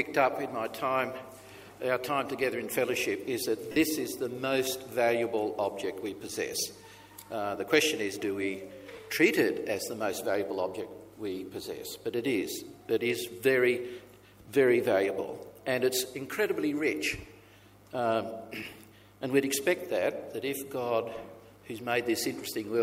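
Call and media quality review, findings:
Lost LE Audio frames at 3.72–3.76 s (about 45 ms, which fits six 7.5 ms LC3 frames) and at 8.96 s (short, about 15 ms). The symptom is a brief noisy smear where tonal content loses its definition. In the Bluetooth LE Audio link and LC3 decoder concealment, the decoder replays the last spectrum with randomised signs and fades it over the longer gap. On a spectrogram, harmonic lines blur into broadband hash. On the waveform, the envelope is held, then tapers at 3.7 s.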